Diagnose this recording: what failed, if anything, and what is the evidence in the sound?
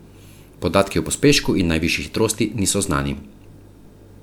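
Nothing failed; no fault is audible anywhere.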